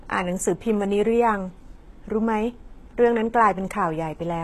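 From start to finish, the speech carries plainly audible codec damage, likely from HE-AAC compression. The top of the spectrum stops dead at about 12.3 kHz. Below that, the treble is not real. It has been rebuilt by spectral band replication, which copies lower bands upward under a coarse envelope. The harmonics no longer line up across the join. S sounds turn gritty and metallic. The overall damage fits a low bitrate, around 16 kbps.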